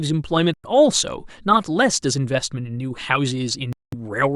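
At 0.54 s and 3.73 s, the speech cuts to silence for 0.10 s, then 0.20 s. Each is likely a Bluetooth stall, with late packets draining the buffer.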